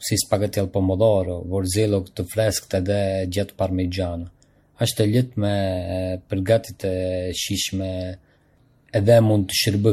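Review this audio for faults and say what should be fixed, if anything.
The whole clip has a swirly, hollow quality with smeared consonant attacks, and nothing above 16.4 kHz. That's generation loss, most likely from about five rounds of MP3 decoding and re-encoding at a rate that sounds like around 64 kbit/s. Each pass requantises on a shifted frame grid, so the noise and spectral holes pile up beyond what one encode at that rate would leave. Keep a lossless master and encode to the lossy format only once, at the final step.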